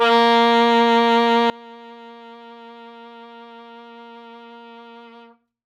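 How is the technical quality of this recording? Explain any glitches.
The recording has one clear problem: a sudden gain jump. At 1.5 s the music drops by about 24 dB in a single step and stays at that lower level to the end. The likely cause is a digital gain change applied between adjacent samples with no ramp. The waveform's envelope shrinks abruptly, and on a spectrogram every frequency, background noise included, dims together along a sharp vertical edge.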